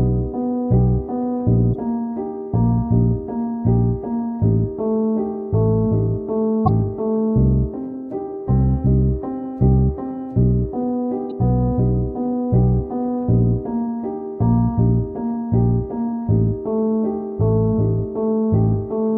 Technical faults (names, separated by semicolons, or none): damaged data in a compressed stream